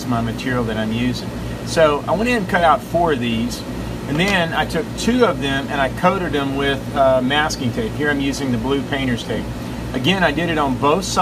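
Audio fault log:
No audible faults detected.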